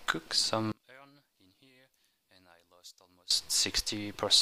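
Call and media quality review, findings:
One channel inverted, 0.72 to 3.31 s. Mono sum drops by about 28 dB, leaving a faint residue. Likely one stereo leg with reversed polarity, so shared content cancels. Check wiring or channel phase setting in the mix path.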